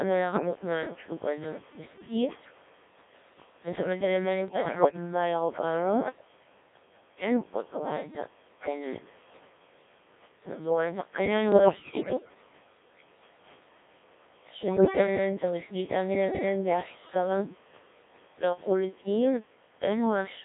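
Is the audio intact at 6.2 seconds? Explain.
No. At 6.2 seconds the speech is robotic and buzzy from the Codec 2 vocoder, which runs throughout. Only pitch, voicing and envelope survive, rebuilt from sine waves within 250 Hz to 3.6 kHz. The heavy damage fits a rate near 1.3 kbit/s.

Gain pumping is also present throughout. The level swings by about 5 dB, likely from excessive input gain hitting a fast limiter. The room noise sits about 35 dB below the speech.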